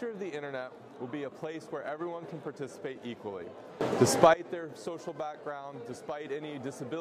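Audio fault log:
3.81–4.34 s: sudden gain jump. Everything, background noise included, steps up by about 18 dB at once and falls back at the end, likely a gain change applied without a ramp. The waveform shows an abrupt block of wider amplitude, and the spectrogram brightens evenly across all frequencies.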